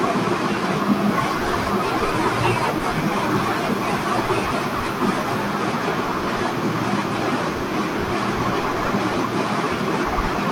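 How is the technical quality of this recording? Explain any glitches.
The speech is marred by three brief glitches from damaged data in a compressed stream, at 2.80–2.85, 7.10–7.15 and 9.32–9.37 s. Each time the decoder misreads corrupt frames and loses sync, producing a short glitch that shows as a brief disturbance on a spectrogram.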